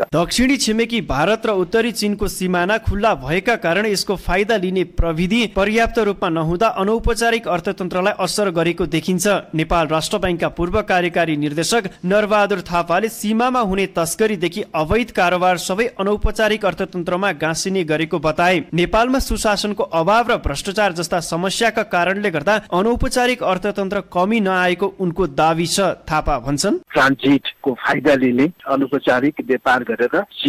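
No technical faults are audible.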